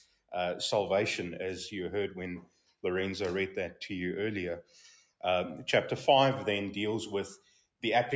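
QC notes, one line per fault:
Throughout: noise suppressor applied to music or sounds. The level pumps and flutters, with held material and decaying tails sinking while attacks come through close to full strength, and the overall loss swinging by around 5 dB. A speech-oriented suppressor was left active on this non-speech material. It treats sustained, steady content as background noise and keeps pulling its gain down and back up, so the sound thins and wavers.
0.00–0.33 s, 2.41–2.76 s, 4.97–5.23 s and 7.37–7.83 s: sound cut by the noise suppressor. In each window the audio drops sharply, by about 17 dB at the first two, about 14 dB at 4.97 s and about 16 dB at 7.37 s, for a few hundred milliseconds. The suppressor classed this content as noise and attenuated it well beyond its general pumping, so the steadier, fading parts cave in before the level recovers. The call-style band limit tops out at 8 kHz.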